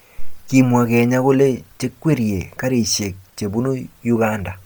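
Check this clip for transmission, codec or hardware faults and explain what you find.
One codec fault runs through the whole clip: heavy damage consistent with Bluetooth LC3 compression, likely from an LE Audio link. The transform coder discards much of the upper spectrum in each short frame and substitutes shaped noise, so the voice takes on a breathy, grainy edge. The damage fits 10 ms frames at a low rate around 32 kbps. A plain low-pass would leave dull, clean highs. Here the top is still present, extending to about 20.2 kHz, but filled with noise.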